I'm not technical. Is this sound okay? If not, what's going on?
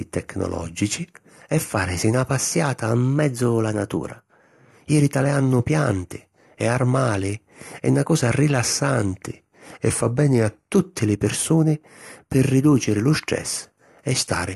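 No. In two places the speech briefly speeds up or slows down, with the pitch shifting along with it. From 2.92 to 4.73 s, just after "e fàrisi na passiata", it runs about 6% fast and about a semitone higher. From 9.77 to 10.73 s, just before "li pirsuni pi ridùciri", it runs about 6% slow and a semitone lower. Each time it then snaps back. This is likely a drift correction step, where software keeping two clocks in sync briefly changed the playback speed.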